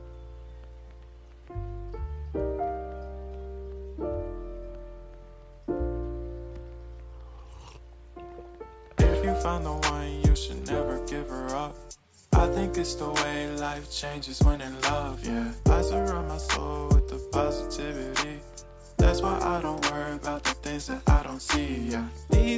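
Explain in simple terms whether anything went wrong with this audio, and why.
Nothing went wrong; no faults are audible.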